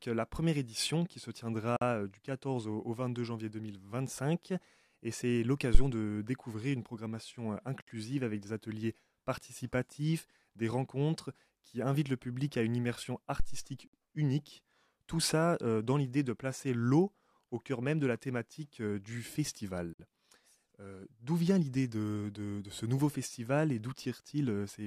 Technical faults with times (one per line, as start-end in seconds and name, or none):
1.76-1.81 gap at a join of encoded pieces
5.75-5.81 phantom power thump
7.81-7.87 gap at a join of encoded pieces
13.40-13.72 phantom power thump
13.87-13.93 gap at a join of encoded pieces
19.93-19.99 gap at a join of encoded pieces